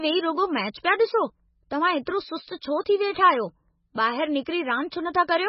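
A speech recording that sounds heavily band-limited and watery throughout. Nothing is present above 5.6 kHz, and the remaining spectrum has a swirly, unstable texture as weak frequency components drop in and out from frame to frame, with s sounds turning metallic and smeared. This is likely MP3 compression at a very starved bitrate, consistent with something around 16 kbps, where the encoder sacrifices the treble and discards low-level detail to stay within budget. Two pre-echo events stand out, at 2.05 s and 4.45 s. In each, a short hiss leads a sharp onset by roughly 16 ms and 13 ms respectively, and the attack itself lands soft. The codec has spread quantisation noise scaled to the loud transient across its whole transform block, so the quiet moment just before the attack fills with noise.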